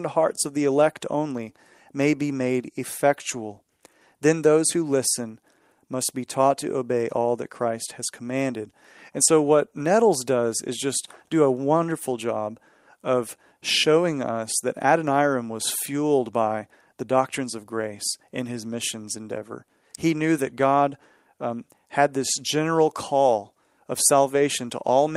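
No technical faults are audible anywhere in the speech recording.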